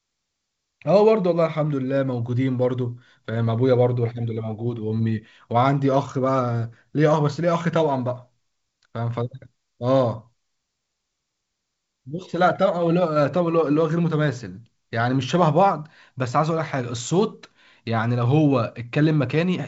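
Speech carried over G.722 wideband telephone coding at 64 kbit/s, with nothing above 7.7 kHz and no audible technical fault.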